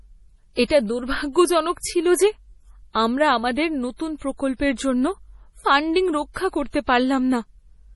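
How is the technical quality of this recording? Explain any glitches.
The recording is held back by heavy MP3 compression throughout the speech. The encoder was starved of bits, which is likely from a low bitrate, and the damage points to something around 32 kbps. It discarded everything above 11.5 kHz and zeroed weak frequency lines that then flicker on and off between frames. The result is dull, muffled treble, a watery, swirling texture, metallic chirps on s sounds, and smeared consonant onsets.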